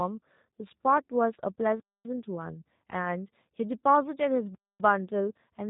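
The speech sounds thin, buzzy and slightly synthetic from start to finish, with nothing above 4 kHz. This is plainly audible G.729 codec damage, which fits an 8 kbit/s G.729A stream. The voice is rebuilt from a vocal tract filter, a pitch predictor and a few pulses per frame.

From 1.80 to 2.05 s, and again from 4.55 to 4.80 s, the sound drops into a hole of 250 ms before resuming. This is a gap between chunks. The audio was delivered in 2.5 s pieces, and silence was inserted at each join. No sound is lost, only interrupted.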